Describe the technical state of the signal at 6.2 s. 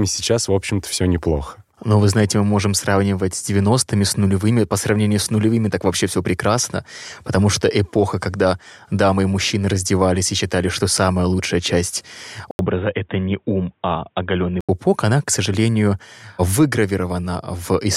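At 6.2 s the speech signal is intact, with no audible dropout, distortion, glitch or other technical fault at that point.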